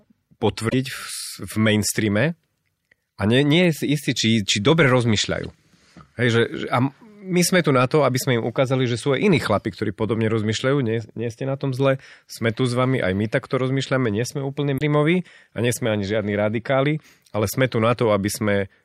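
Damaged data in a compressed stream causes brief glitches at 0.66–0.74 s, 5.43–5.45 s after "či či dobre", 14.75–14.81 s after "rozmýšľame nie sme úplne", and 16.93–16.96 s. Corrupt bytes make the decoder misread frames and lose sync.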